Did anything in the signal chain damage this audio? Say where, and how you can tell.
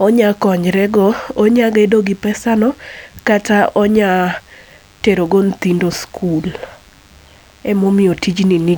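Yes. A DECT cordless phone buzz runs throughout the speech: a thin, steady 100 Hz tone with a dense harmonic series, roughly 35 dB below the speech. This enters in the analogue wiring, where a nearby DECT handset or base station's 10 ms radio bursts are rectified into audio.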